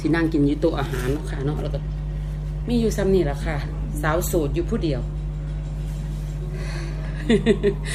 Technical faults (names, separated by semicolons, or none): mains hum